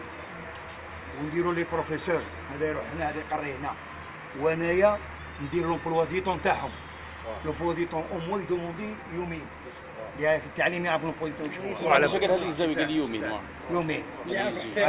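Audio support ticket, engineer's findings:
No fault found on listening. No symptom to trace to any component in the chain.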